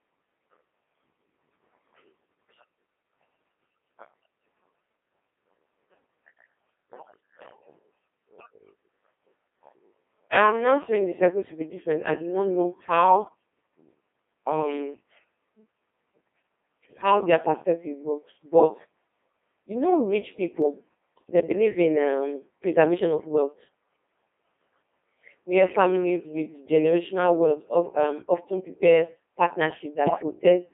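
The whole recording passes through a Codec 2 vocoder at a very low rate, consistent with about 2.4 kbit/s. Only pitch, voicing, energy and a spectral envelope survive, and the decoder rebuilds speech from sine waves inside roughly 250 Hz to 3.5 kHz. The result is heavily robotic, buzzy speech with no original waveform left.

At 20.62 s, just after "you know rich", the stream likely lost a couple of samples, a small fraction of a millisecond. The waveform jumps straight to a later value, producing one sharp click that appears as a thin vertical line in the spectrum, with no sound audibly missing.

From 30.06 to 30.22 s, bit errors on digital voice radio corrupt a few vocoder frames at an error rate of roughly 15 percent. The damaged bits scramble pitch, level and spectral settings, so the synthetic speech lurches into warbling, bleeping robotic gibberish.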